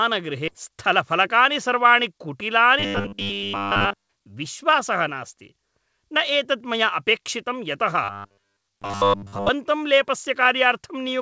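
At 0.48 s a stretch of queued audio was dropped, around 0.7 s of it, to catch up with packets already waiting. Playback skips ahead with no filler, and the speech on either side of the gap is spliced almost directly, so part of what was said simply vanishes.

From 0.70 to 2.20 s a jitter buffer speed-up follows, as the receiver trims its oversized backlog by cutting tiny pitch-period slices, roughly 70 ms in total. The speech runs at 105 % of normal pace with its pitch unchanged, sounding slightly rushed.

From 2.80 to 4.10 s and again from 8.04 to 9.50 s the speech turns into robotic sound from repeated short buffers, likely because fresh audio arrived too rarely and the last few milliseconds kept looping. Much of the real signal is replaced, and a stiff metallic buzz at 100 Hz rides over the speech, which fits a 10 ms repeated buffer. Throughout, the G.722 call path at 64 kbps leaves nothing above 8 kHz.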